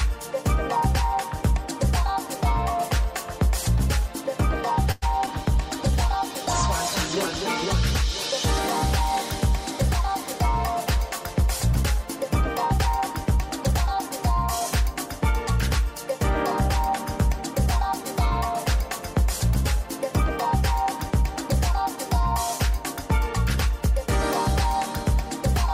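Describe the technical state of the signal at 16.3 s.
At 16.3 s the signal is intact, with no dropout, clipping, glitch or other technical fault present at that moment.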